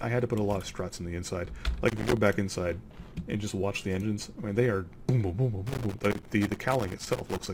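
Two bursts of loose connector crackle break up the audio, a short one from 1.88 to 2.17 s and a longer one from 5.67 to 7.47 s. Each is irregular scratching and chopping, the sound of a worn or dirty contact rapidly making and breaking the signal path as it shifts.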